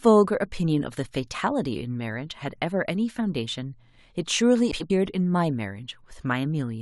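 From 4.71 to 4.90 s, the speech has frames out of order. Two neighbouring blocks of about 93 ms each were decoded in swapped order, which fits runs of four frames. The stretch sounds like a garbled flutter. No time is lost.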